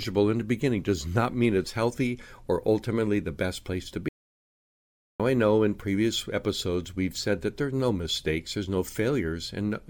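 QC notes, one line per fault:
4.09–5.20 s: audio dropout to silence. The speech cuts off mid-flow and returns about 1.11 s later. The gap is dead silence with no room tone at all. The input was likely lost while the recorder kept writing silence, so whatever was said there is gone.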